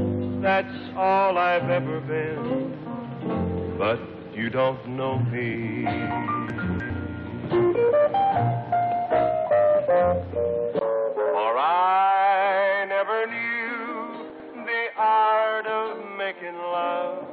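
Around 6.5 to 6.9 s there's a jumbled moment: chunks out of order, with a 100 ms chunk turning up three chunks late. Nothing goes missing, but the sequence is scrambled. At 10.79 s there's a 20 ms gap, then the sound goes dull and boxy right through to the end, with nothing above 4.3 kHz and a new noise floor roughly 45 dB under the signal, though the level barely moves. That's likely the input switched to a poorer device. At 14.3 to 14.5 s there's another out-of-order chunk, this time 100 ms arriving just one chunk late, so it's a briefer stumble.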